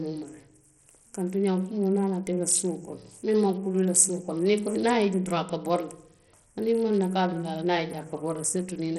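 From start to end the speech has nothing above 14.1 kHz, with flickering treble and gritty grain, likely heavy Bluetooth SBC compression at a low bitrate around 64 kbps.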